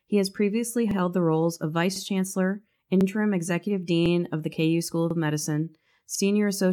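Overlapping chunks stutter the speech at 0.91, 1.96, 3.01, 4.06, 5.11 and 6.15 s, first between "has previously" and "the roles of". Each 1.0 s chunk starts 48 ms early, replaying that sliver. Unlike dropouts, nothing goes missing. A brief fragment doubles at a steady beat.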